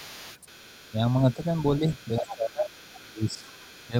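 From 0.0 to 0.92 s the other side's voice leaks through faintly, about 20 dB below the speech. This is likely an echo canceller leaving loudspeaker sound in the microphone. It returns at 1.08 to 2.35 s, then at 2.66 to 3.06 s and 3.53 to 3.89 s, both about 25 dB down. On a spectrogram it appears as a weak second set of harmonics beneath the main voice.

Speech is suppressed in double talk at 0.91 to 1.04 s (a dip of about 5 dB), 1.23 to 2.81 s (about 15 dB, roughly a second in total), 3.02 to 3.55 s (about 20 dB) and 3.87 to 3.96 s. The canceller likely ducks the talker along with the echo, so the voice sinks and thins. The waveform shows notched envelopes, and the spectrogram shows faded upper bands.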